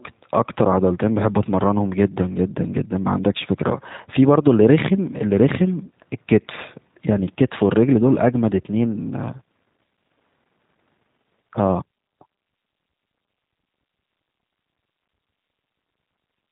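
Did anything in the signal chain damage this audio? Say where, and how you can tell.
Yes. The damage comes from the codec stage and runs through the whole speech clip. Nothing above 3.8 kHz survives, and the speech has the slightly rough, synthetic texture of a low-rate CELP coder. Each short frame is rebuilt from a vocal tract filter, a pitch predictor and a few fixed pulses rather than the original waveform. That is the signature of G.729 coding, and the plainly audible damage fits an 8 kbit/s G.729A link.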